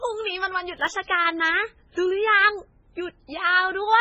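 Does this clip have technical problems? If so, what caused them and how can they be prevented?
Yes. Throughout the speech, nothing is heard above 8.3 kHz. The sound is watery and swirly, with metallic chirps on s sounds and smeared attacks. The likely cause is heavy MP3 compression. The damage points to a very low bitrate, around 16 kbps. Short of bits, the encoder cut the treble and switched weak frequency lines on and off between frames. Prevent this by encoding at a much higher bitrate or keeping an uncompressed master.

From 0.77 to 0.93 s, a burst of processor overload crackle tears through the speech. The processor could not finish its small audio buffers in time. About seven deadlines were missed in a row. Each miss left a short hole of silence with hard edges. The holes fit buffers of roughly 1.5 ms. Together they sound like gritty crackle that stops once the load eases. Prevent this by reducing processor load or using a larger audio buffer.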